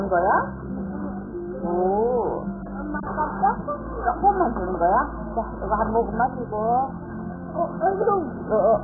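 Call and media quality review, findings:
Dull, muffled audio across the whole clip, with nothing audible above about 1.6 kHz. Heavy smearing and a warbling, watery texture on sustained content. Likely cause: AAC compression (AAC-LC) at a very low rate. The encoder cuts the top of the spectrum and coarsely quantises the remaining frequency lines per frame, producing holes and swirling artefacts. The degree of damage fits a bitrate near 8 kbps. Check encoder bitrate settings upstream.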